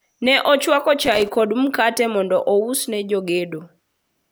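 A worn or dirty contact kept making and breaking from 1.01 to 1.36 s, chopping the speech into an irregular burst of loose connector crackle and scratching.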